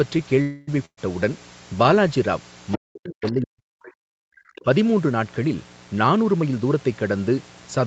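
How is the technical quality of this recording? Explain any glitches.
The recording has several clear problems: a steady electrical buzz under everything, a stall and a dropout near the start, a stretch where the talker is pushed down while a second voice bleeds in, and a hurried passage near the end. The audio stops at about 8 kHz, which fits an Opus call codec at around 32 kbps.

Mains buzz runs through the whole recording as a constant, raspy hum sitting roughly 30 dB below the speech. It is built on 60 Hz and its harmonics, which gives it a gritty edge rather than a pure low tone. A dimmer, rectifier or poorly shielded cable lets sharp switching spikes into the signal twice per mains cycle, and those spikes carry harmonics well up into the kilohertz range.

From 0.41 to 0.84 s the sound hangs. The last moment is stretched into a tail that fades, and then the speech carries on exactly where it left off, with nothing lost. 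This is most likely a call audio freeze. Delayed packets let the jitter buffer run dry, and the receiver filled the wait with about 260 ms of synthetic continuation. This inserts a pause rather than removing any speech.

Straight after, from 0.85 to 0.99 s, a burst of packet loss cuts out about 120 ms of speech. The receiver briefly extends the last sound, then lets it die to near silence for about 70 ms before resuming further along. Several consecutive packets failed to arrive in time, and the concealment faded its guess the longer the gap lasted, so this part of the speech is simply gone.

Scraps of another voice appear at 2.72 s, from 3.22 to 3.31 s, and from 4.56 to 4.64 s. They sit roughly 10, 20 and 25 dB below the talker. This is likely the other side's voice leaking through. The far end's loudspeaker output reached the microphone, and the echo canceller did not fully subtract it, so fragments of the remote talker survive in the sent audio.

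Between 2.77 and 4.34 s the talker repeatedly dips, dulls and drops out in pieces, at worst by something like 40 dB, over roughly one and a half seconds in total. This is likely speech suppressed in double talk. With both parties talking at once, the echo canceller could not tell the local voice from the loudspeaker echo and attenuated everything.

From 5.93 to 6.75 s the speech sounds rushed while the pitch stays natural, running at about 111% speed. This is a jitter buffer speed-up. After a backlog built up, the receiver trimmed many short pitch-period slices, roughly 100 ms in all, to bring the delay back down. The result is compressed timing without any chipmunk effect.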